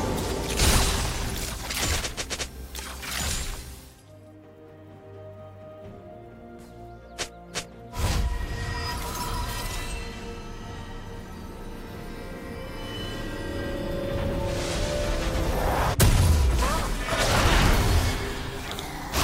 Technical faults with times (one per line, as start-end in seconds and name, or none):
none